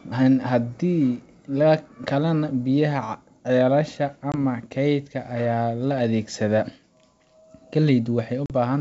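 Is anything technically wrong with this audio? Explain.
Yes, there's packet loss on an ADPCM call. The call itself sounds like G.722 wideband, likely at the full 64 kbit/s. At 4.32 s and 8.46 s the speech drops into hard-edged silence: about 20 ms the first time, roughly one packet, and 40 ms the second, a couple of packets. The gap knocks the decoder's adaptive predictor and step size out of step with the sender's, so the speech comes back slightly distorted and takes a few tens of milliseconds to settle.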